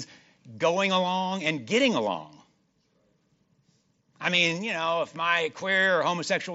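Nothing goes wrong anywhere in this bit of speech, which comes over an ordinary Bluetooth mSBC headset link doing its usual job.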